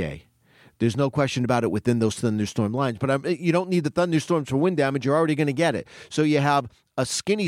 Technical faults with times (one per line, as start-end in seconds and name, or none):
none